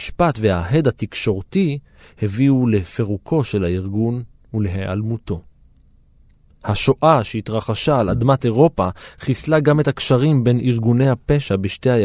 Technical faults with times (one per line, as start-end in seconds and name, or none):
none